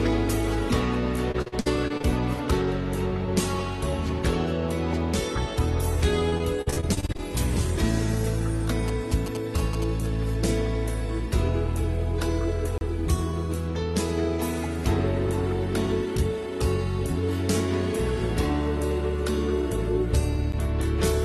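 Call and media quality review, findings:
Call and media quality review, findings:

Repeated packet loss (robotic sound), 1.31–2.06 s: choppy, with holes. Jitter buffer/network side. Seven gaps, longest 57 ms, roughly 30% of the stretch patched by stretching the last sound. Concealment can't keep up, hence the robot.

Same again, 6.30–7.20 s: eleven gaps, longest 48 ms, about 27% concealed. Same component, same mechanism, just denser and shorter holes.

GSM signalling bursts, 8.88–10.06 s: galloping dit-dit ticks plus 217 Hz buzz, about 15 dB under the signal. A 2G handset nearby is signalling and the analogue front end is rectifying it. Move the phone away.

Block of digital silence, 12.78 s, 32 ms: hard dropout. Playback/processing thread likely missed its deadline, so the buffer went out as zeros. Check CPU load and the audio callback.

Another digital silence hole at 20.52 s, about 11 ms: short tick. 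Length fits one 512-sample buffer at 48 kHz, so likely again an underrun on a single callback. Same fix as above. The Opus call path itself sounds as expected, with a 12 kHz top end, consistent with roughly 32 kbps.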